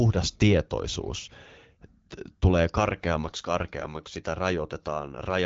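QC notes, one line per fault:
No faults are heard anywhere in the clip. The speech comes through an AMR wideband (HD Voice) path at a rate that fits 12.65 kbit/s, with the top end stopping near 7 kHz and only light coding texture.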